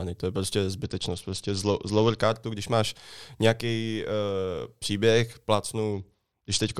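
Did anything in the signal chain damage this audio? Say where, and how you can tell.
Yes, a Bluetooth SBC bit pool drop on the wireless link: from 0.84 to 2.20 s and 5.93 s onward, the treble dulls and gritty noise rises, which fits a bit pool cut to about 9.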